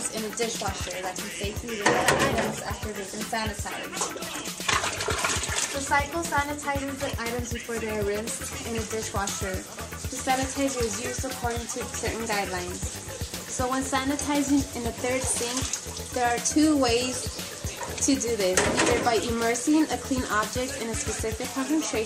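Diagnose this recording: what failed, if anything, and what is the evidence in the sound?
Something did go wrong, and it's a tiny one: a single bit error spike at 6.46 s. You hear one sharp, dry tick that has nothing to do with the surrounding sound, a broadband click peaking around -16 dBFS, and it's gone instantly because only one sample is affected. That points to the digital side, either storage or a memory or link transfer, where one flipped bit knocks a sample off by a power of two before the next sample lands back where it belongs.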